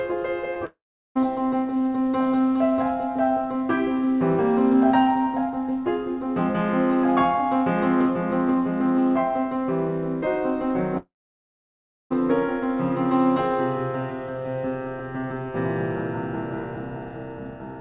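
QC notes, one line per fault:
0.54–0.57 s, short concealed packet loss: about 20 ms of music missing, smoothed over by extending the preceding sound; shows as a brief smear in the spectrogram.
0.65–1.17 s, long network dropout: half a second lost, likely a network gap; a fading continuation of the prior sound, then about 380 ms of near-flat waveform and empty spectrogram.
10.97–12.12 s, long network dropout: 1.14 s lost; the last sound decays briefly, then roughly a second of silence, a flat waveform, and a blank spectrogram band before the music resumes.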